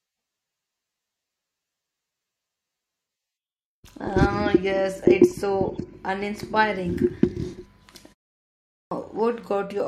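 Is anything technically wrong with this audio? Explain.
Yes. Clipped start after a pause, at 8.70 to 8.91 s: after a silent gap of about 0.64 s, the output device has dropped into a low-power or idle state and must wake and resynchronise before it plays again. The first 212 ms of the returning speech is lost, so the utterance bursts in abruptly from silence, missing its opening sounds.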